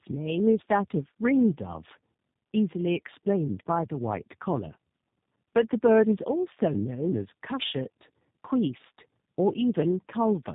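Throughout the speech, tandem speech coding is audible. The sound fits two 8 kbit/s G.729A stages joined by a G.711 link, each recoding the other's errors. Nothing reaches above 3.8 kHz, and the compounded roughness and warble go beyond what one coder or simple band-limiting would produce.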